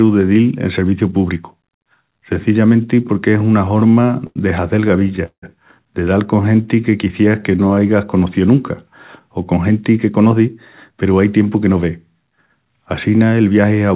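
From 3.68 to 4.38 s the speech breaks into repeated stalls (stutter). Packets arrive late and the jitter buffer keeps running dry. Ten times the receiver stretches the last sound, about 174 ms in all, with the longest gap 87 ms. Nothing is lost, but it drags.

A second stutter runs from 4.82 to 5.44 s. There are seven gaps, filling 227 ms, over a third of that stretch. The longest wait, 168 ms, is held long enough that the repeated sound fades.

From 6.42 to 7.80 s there is a jitter buffer slow-down. The buffer is low, so the receiver repeats single pitch periods to rebuild its reserve. About 164 ms is added. Speech plays at 89% speed with unchanged pitch, and sounds are drawn out.

Jitter buffer speed-up follows from 9.69 to 10.48 s and again from 10.91 to 12.10 s. The buffer holds too much, so short pitch-period pieces are cut, about a tenth of a second each time. Speech runs at 110% and sounds hurried at the same pitch. 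Throughout, the call path leaves nothing above 4 kHz, which points to narrowband G.711 coding.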